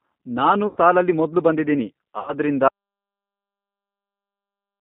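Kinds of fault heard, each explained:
G.729 codec: The speech is carried as 8 kbit/s model-based coding, band-limited to roughly 150 Hz to 3.7 kHz, with plainly audible roughness and a synthetic edge throughout.
VoIP packet loss concealed by the speech codec: About 90 ms of audio went missing twice and was filled by extrapolation, heard as fading smears at 0.67 to 0.78 s, before "ಸಾಲಲ್ಲಿ ಮೊದ್ಲು ಬಂದಿದೀನಿ", and 2.19 to 2.34 s.
Audio dropout to silence: From 2.68 s to the end the sound cuts to silence with no room tone, likely from a lost input or link.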